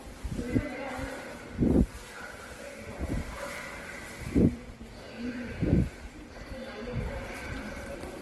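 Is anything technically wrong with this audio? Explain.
Yes, two faults are audible.

Throughout the clip, the sound carries two different kinds of coding damage at once, heard together, with nothing present above 12 kHz. This likely points to transcoding between lossy codecs, a low-rate Opus-style encode later re-encoded as MP3. The second encoder spent its bits reproducing the first encoder's artefacts and added its own. A single lossy pass would leave only one kind of artefact.

From 3.33 to 3.58 s there is processor overload crackle, a gritty tearing burst riding on top of the sound. Around ten buffers, each a few milliseconds long, missed their deadlines over this stretch. Each miss replayed a fragment of old audio with hard edges, and the sound recovers once the load passes. A single dropout would give one clean gap. Here the rapid string of repeated fragments produces texture rather than silence.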